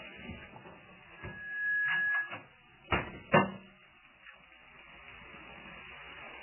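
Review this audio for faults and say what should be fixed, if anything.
Heavy MP3 compression affects the whole clip. Nothing is heard above 3 kHz, so the top end is sliced off flat. Weak detail flickers in and out, giving a watery, swirly texture and smeared attacks. This likely comes from a very low bitrate, around 8 kbps. Encode at a much higher bitrate, or keep a lossless master, to prevent it.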